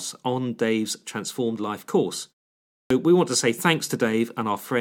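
After a short pause of about 0.46 s, the speech resumes at 2.71 s with its opening chopped away: the first 0.19 s, up to 2.90 s, is missing, so the word bursts in abruptly out of silence without its initial sounds. This is a clipped start after a pause. During the gap the output device dropped into a low-power or unlocked state, and it needed nearly 200 ms to wake and resynchronise, swallowing the onset of the next phrase.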